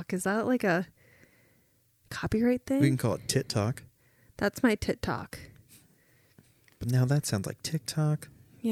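Nothing technically wrong turns up in this bit of speech; there's no fault to point to anywhere in it.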